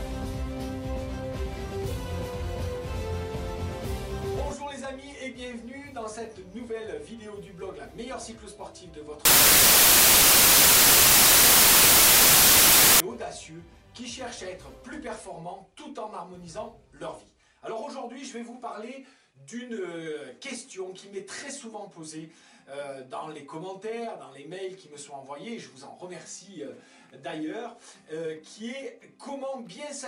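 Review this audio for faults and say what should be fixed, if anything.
From 9.25 s to 13.00 s there is a wrong sample width fault. Packed 24-bit data is read as 32-bit samples, so bytes straddle sample boundaries. That produces loud noise with the original buried underneath, running about 1.33 times fast and pitched up. Prevent it by carrying the sample format explicitly with the data and checking it at every read.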